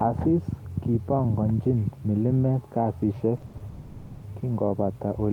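A speech recording of about 5 seconds breaks into a stutter between 3.37 and 3.62 s: four brief hitches, the longest 70 ms, stretched sound filling 130 ms, roughly half that span. These are repeated stalls (stutter), where late packets kept draining the jitter buffer and the receiver extended the last sound each time, so nothing is lost but the audio drags. From 3.68 to 4.24 s the sound hangs as a sustained, fading buzz or hiss for 540 ms with no silence before it resumes exactly where it left off, pushing everything after it 540 ms later. That is a call audio freeze, likely from packets held up in transit while the receiver continued the last sound.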